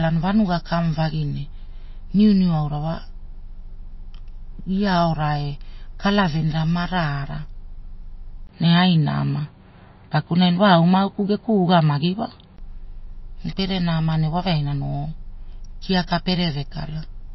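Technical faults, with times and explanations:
Throughout, MP3 compression: the audio sounds watery and swirly, with nothing above 5.8 kHz, likely from a low-bitrate MP3 encode around 25.5 kbps. Starved of bits, the encoder drops the treble and lets weak frequency detail flicker in and out between frames.
8.47 to 12.58 s, input switched to a poorer device: a 20 ms gap, then the sound goes duller and boxier with nothing above 4.7 kHz, a level shift of roughly 5 dB and a new noise floor well below the signal, likely a change to a narrower-band microphone or headset.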